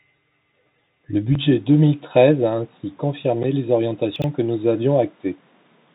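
A speech clip carrying the Bluetooth CVSD headset codec from start to finish. The damage is plainly audible. Nothing above 3.8 kHz gets through, so the sound is narrow and telephone-like. This codec sends one bit per sample and only says up or down, with an adapting step size. Loud high sounds outrun that step and distort. S sounds turn scratchy. A granular hiss sits under the speech. All of this fits a 64 kbit/s CVSD stream.

At 1.35 s the character of the sound changes and stays changed to the end. There is no gap at the join and no real jump in level. A new, faint background noise appears, roughly 40 dB below the speech, with a tone of its own. The most likely cause is an input switched to a poorer device mid-recording. The codec's lower cutoff still sets the overall bandwidth. The audible change is the new device's tone and noise floor.

Between 4.16 and 4.24 s there is a brief garbled moment. 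These are chunks out of order. A 20 ms piece of audio was written three chunks late. It plays after the three pieces that should have followed it. Nothing is missing, but the sequence is scrambled, with three hard joins.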